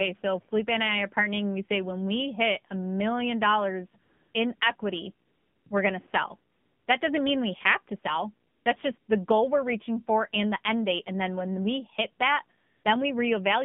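Throughout, the AMR narrowband mobile codec confines the speech to roughly 150 Hz to 3.5 kHz. The buzzy, synthetic tone fits a low 7.4 kbps mode.

AMR comfort noise fills pauses at 4.02 to 4.34, 4.56 to 4.60, 4.76 to 4.78, 5.26 to 5.66, 6.52 to 6.88, 8.48 to 8.66, 8.98 to 9.08 and 12.58 to 12.84 s. Speech frames stop there. Smooth, steady synthetic noise replaces the real background and switches abruptly in and out.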